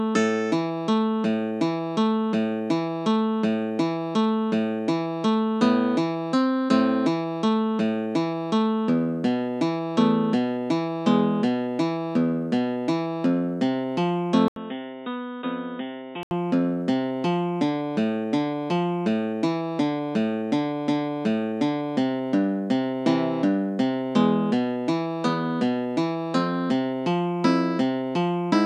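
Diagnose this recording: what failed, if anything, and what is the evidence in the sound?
At the driver stage, the input was likely switched to a poorer device. At 14.48 s an 80 ms gap gives way to dull, boxy sound with nothing above 3.8 kHz. The level falls by roughly 10 dB and a faint new noise floor appears. Full bandwidth returns at 16.31 s.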